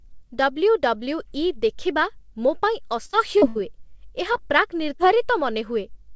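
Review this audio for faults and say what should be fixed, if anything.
Right after "ଦେଖିବା ମୋ ପାଇଁ", from 3.06 to 3.61 s, there's a patch of repeated packet loss (robotic sound). Five gaps land close together, about 180 ms of audio missing in all, the longest around 73 ms. The receiver papers over each one by stretching the last bit of sound, so nearly a third of that half-second is synthetic. That's why it turns choppy. Fix: give the jitter buffer more headroom or add forward error correction so bursts of loss get recovered instead of guessed.

Two short concealed packet losses follow. At 4.32 to 4.45 s about 20 ms goes missing. At 4.96 to 5.15 s about 40 ms goes missing. In both spots the decoder continues the previous sound to fill the hole, then blends back into the real signal. You hear a quick smear or wobble, and the second one adds roughly 15 ms to the timing. Fix: the same network-side measures, steadier delivery plus redundancy, would keep these tiny holes from appearing.

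The band-limit at 8 kHz fits G.722 at 64 kbps on the call path.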